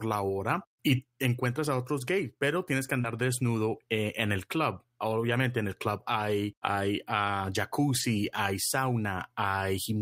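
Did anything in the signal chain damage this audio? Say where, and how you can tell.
Yes, the damage happened in the network, where audio went missing just after "gays pero tienes que". In the short concealed packet loss, about 20 ms of audio arrived too late for the decoder, which covered the gap with 24 ms of extrapolated sound from 3.01 to 3.06 s. The decoder carried the preceding sound forward and then crossfaded back into real audio, so at that point there is a brief smear or wobble.

In the same place, the lost packet was rebuilt from error correction. The packet that followed carried a low-bitrate duplicate, and the decoder played it for 20 ms from 3.04 to 3.06 s, which fits a single lost packet. There is no silent gap, but that short stretch sounds rougher and noisier than the audio around it. The coarse copy keeps the moment from dropping out, at the cost of fidelity.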